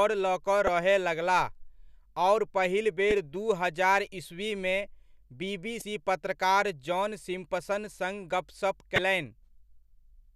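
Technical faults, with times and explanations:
0.67 s, 3.11 s, 5.79–5.82 s and 8.95–8.99 s: damaged data in a compressed stream. Corrupted bytes make the decoder lose frame sync and resync, leaving brief glitches.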